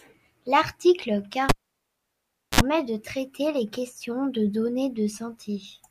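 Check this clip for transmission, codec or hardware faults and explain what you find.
One hardware fault is present. A cable pulled and plugged in from 1.49 to 2.61 s: a pop, about 1.06 s of near silence, a 58 ms burst of 60 Hz mains buzz as the plug's tip touches first, then a second pop. The buzz and paired pops rule out a plain network dropout.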